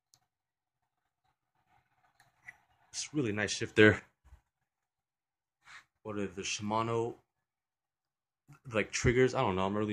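There's a sudden gain jump from 3.76 to 3.99 s, where the audio and its background noise leap up about 10 dB together, likely a gain setting applied without a ramp.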